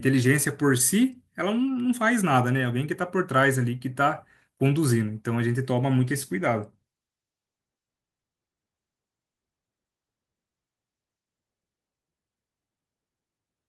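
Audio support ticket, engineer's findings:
Speech turns rough and watery, top end dulled, 6.03 s to 12.29 s; worst stretch holds about 5.45 s. Call bitrate drop: bandwidth estimate fell, encoder (Opus) coding more coarsely, consistent with a fall from roughly 32 to 18 kbps. Clears at 12.29 s once rate restored.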